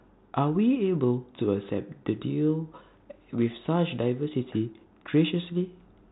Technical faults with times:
none

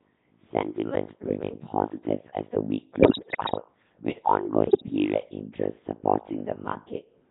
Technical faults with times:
0.00-7.30 overlap-add ripple
0.00-7.30 Codec 2 vocoder
3.00-3.62 bit errors on digital voice radio
4.66-4.90 bit errors on digital voice radio

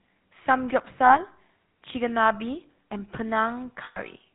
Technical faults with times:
0.00-4.34 GSM full-rate codec
1.06-1.17 lost GSM frames
3.84-3.98 lost GSM frames

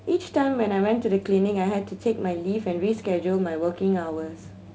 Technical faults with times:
none

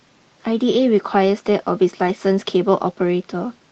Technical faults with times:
2.07-2.09 lost packet rebuilt from error correction

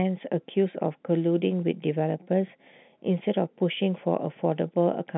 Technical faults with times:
none

